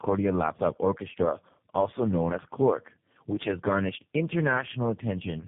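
Speech, with tandem speech coding throughout. It sounds rough, muffled and warbly, with nothing above 3.7 kHz. Each coder re-encodes damage left by the one before. The sound points to three low-rate speech codecs in a row, such as GSM, AMR-NB and G.729A.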